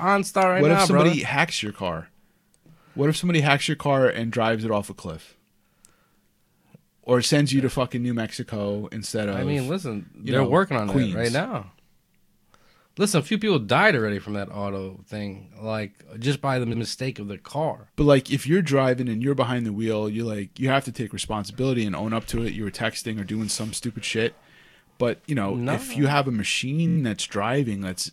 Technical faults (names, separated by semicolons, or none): repeated frames